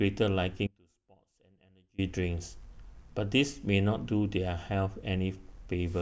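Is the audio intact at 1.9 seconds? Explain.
No. At 1.9 s the speech is inside an audio dropout to a faint residue running from 0.67 to 1.98 s, about 1.3 s long. The wanted signal cuts out abruptly, likely from a break upstream while the later path stayed live, leaving only a faint residue roughly 30 dB down rather than true silence. Unlike a natural pause or fade, the loss starts and ends sharply in mid-flow.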